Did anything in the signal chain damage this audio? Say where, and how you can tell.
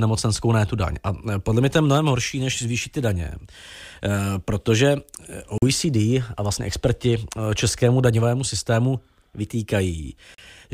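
Yes. The speech drops to silence twice, at 5.58 s for 41 ms and at 10.35 s for 38 ms, then carries on. That points to the playback stage, likely a Bluetooth stall. Held-up packets let the headphone buffer run dry, and output paused until resent data arrived.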